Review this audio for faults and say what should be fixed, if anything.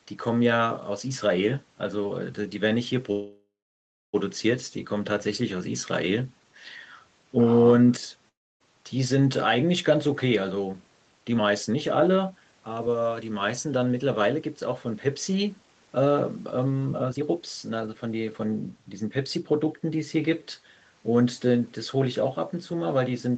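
At 3.11 s a call audio freeze begins. The last sound is stretched into a fading buzz, then about 0.62 s of silence, until 4.15 s. Delayed packets likely emptied the jitter buffer. Speech resumes where it stopped, so about 1.02 s of delay is added and nothing is lost. Fix the network path's delay spikes, or give the jitter buffer more headroom.

A long network dropout runs from 8.29 to 8.62 s. A short fading fill gives way to about 0.28 s of silence. Speech then returns with roughly 0.32 s missing, likely because packets never arrived. Reduce packet loss on the link, or add forward error correction.

Jitter buffer speed-up follows twice. From 10.24 to 16.06 s speech plays at 109% speed. From 16.91 to 19.89 s it plays at 117%. Pitch stays the same, but the delivery sounds hurried. Each stretch sheds roughly half a second in small pitch-period cuts as the buffer drains its backlog. Smooth the packet bursts upstream, or let the buffer catch up more gently.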